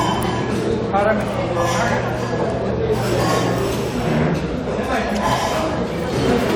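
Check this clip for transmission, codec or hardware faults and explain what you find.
No transmission, codec or hardware faults turn up in this clip.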